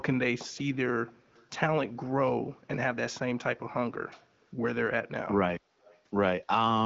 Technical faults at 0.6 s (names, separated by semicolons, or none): echo leak